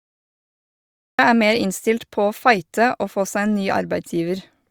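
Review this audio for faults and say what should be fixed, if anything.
There's a cut-off start here: pure digital silence from 0 to about 1.19 s, then the speech jumps in mid-sound with no natural attack, because capture only kicked in after the talker had already begun. Start recording a beat earlier, or use a pre-roll buffer, so the opening isn't clipped.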